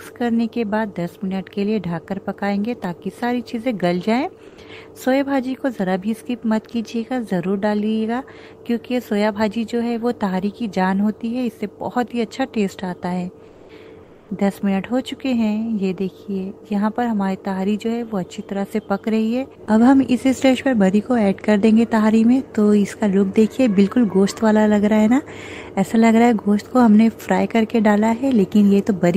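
Comfort noise in place of the background at 4.47–4.57 s, 13.47–13.69 s and 14.03–14.29 s: brief, featureless hiss about 2 to 5 dB quieter replaces the real background, likely from Opus discontinuous transmission.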